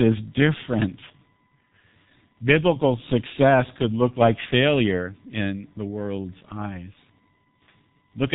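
From the first moment to the last, a steady USB whine sits under the speech. Its pitch is fixed at 1 kHz, and that is also its strongest component. The tone comes from the USB bus drawing current in 1 ms frames. That pulsing leaks into the audio through the power or ground. It stays faint, roughly 45 dB below the speech.

The whole clip also carries heavy G.723.1 codec damage. This old internet-telephony codec works in 30 ms frames. The sound fits its low rate, around 6 kbit/s. Nothing passes above 3.8 kHz, so the speech is dull and muffled. The codec's voice model updates slowly. That leaves the voice hoarse and rough. Consonants smear into each other and lose their edges.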